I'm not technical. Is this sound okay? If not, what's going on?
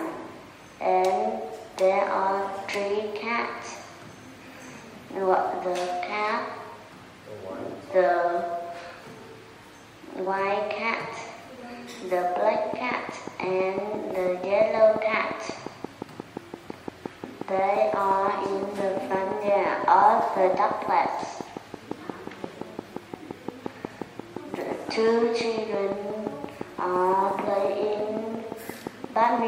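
No. A train of clicks runs from 12.56 s to 29.40 s: a steady ticking at nearly six clicks per second, about a hundred in all, each one much the same and poking out louder than the sound beneath it. The ticks carry on through quiet moments too. The likely cause is an outside pulse getting into the recording, such as electrical interference from nearby equipment or a faulty connection or power supply.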